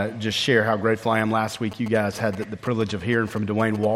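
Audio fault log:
1.72–3.85 s, GSM signalling bursts: a nearby 2G phone is chattering with its network, and the audio circuit rectifies those radio pulses into galloping ticks and short buzzes at about 217 Hz, sitting roughly 15 dB under the programme until it stops.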